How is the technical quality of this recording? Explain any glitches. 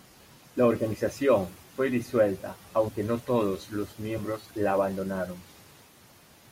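Two short glitches interrupt the speech. Compressed frames skipped at 2.87 s and 4.17 s: whole coded frames never play, so the audio jumps ahead about 40 ms, then 20 ms.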